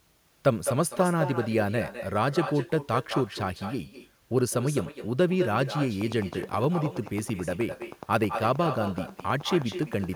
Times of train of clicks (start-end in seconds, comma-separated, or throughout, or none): 6.01-10.05